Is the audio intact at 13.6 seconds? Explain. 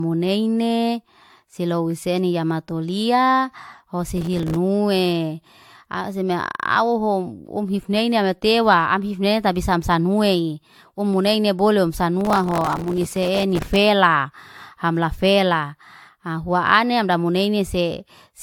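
No. At 13.6 seconds the clip is inside a burst of processor overload crackle that runs from 12.21 to 13.76 s. The processor could not finish its small audio buffers on time and missed deadline after deadline. Each miss replayed a fragment of stale audio with hard edges. The result is a gritty tearing that rides over the speech and stops at 13.76 s. The grain suggests buffers of about 3 ms, with something like a hundred missed over the stretch.

Generation loss also colours this moment and the whole recording. The speech sounds swirly, smeared and hollow, and its attacks are blurred. Nothing is present above 19.4 kHz. This is likely the result of AAC-LC encoding repeated several times. Each new pass quantised on a shifted frame grid, so noise and spectral holes piled up beyond what a single pass at around 96 kbit/s would cause.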